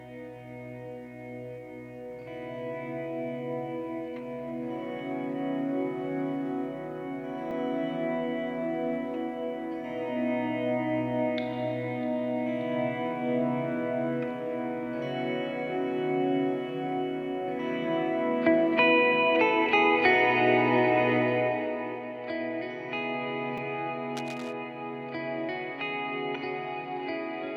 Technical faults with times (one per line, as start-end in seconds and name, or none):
7.51 repeated buffer
23.57 repeated buffer
24.16-24.53 cable scratch noise